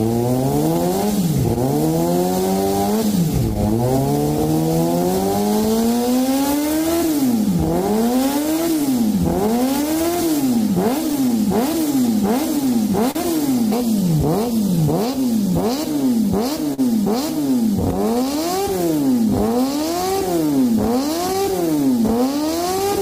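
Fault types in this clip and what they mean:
clock drift between sender and receiver: The sending device's clock runs around 3% slower than the receiver's, so the jitter buffer keeps running low and must be topped up. Throughout the clip this leaves a slightly unsteady pace, with small timing hiccups arriving at irregular intervals.
repeated timing corrections: To keep pace with the slow sender, the receiver keeps repeating short slices of audio from about 0.02 s to 22.87 s. Playback runs at 98% speed, stretching the sound by roughly half a second overall, heard, if at all, as faint stumbles and drag.
scattered short gaps: Isolated packets arrived late or went missing, and each hole was filled by extending the preceding sound. This happens in four stretches (1.2 to 3.9 s, 7.5 to 11.2 s, 13.1 to 16.8 s, 18.7 to 23.0 s), leaving brief ticks and smears, the longest around 40 ms.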